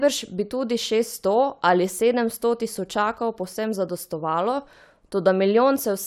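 No technical faults can be heard anywhere here.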